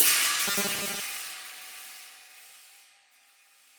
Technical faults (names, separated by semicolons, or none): robotic sound from repeated short buffers